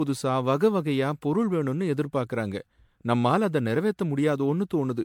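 Generation loss runs throughout the speech, from start to finish. The sound is swirly and hollow, with smeared consonant attacks and a watery, holed texture that seems worse than a single encode would leave. The likely cause is repeated lossy re-encoding, around seven passes through an MP3 chain that points to roughly 96 kbit/s. Each pass requantised on a shifted frame grid, stacking noise and spectral gaps, and nothing remains above about 19.9 kHz.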